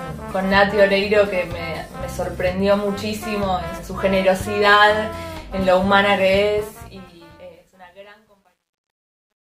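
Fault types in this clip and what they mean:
Truncation distortion on a fade: the fade-out starting around 6.4 s runs through a gain stage that is rounding to coarse steps without dither, which fits a path keeping about 11 bits. From about 6.36 s the tail picks up grit, and from 7.49 s to 9.41 s it gets worst, with the waveform collapsing into blocky steps as the level sinks.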